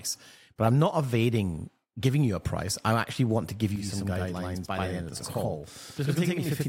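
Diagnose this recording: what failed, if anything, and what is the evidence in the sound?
Channel delay (doubling) begins at 3.76 s and runs to the end of the clip. From that point the speech gains a second copy at equal level, trailing by about 85 ms, heard as a distinct slap rather than a smear. This is a driver or buffer fault. One channel fell a whole buffer behind its partner, and the offset fits a 4096-sample buffer. When the two channels were folded to mono, the late copy stayed audible as a separate doubled image.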